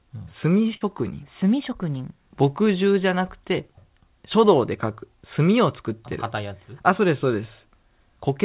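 At 0.74 s a burst of packet loss interrupts the speech for about 0.11 s, ending at 0.85 s. The receiver hid the missing packets by extending the last sound for about 65 ms and fading it, which gives a brief held buzz or hiss, while about 60 ms of speech was lost outright. The speech resumes slightly ahead of where it left off. Across the clip the band stops at 4 kHz, which points to a narrowband call codec.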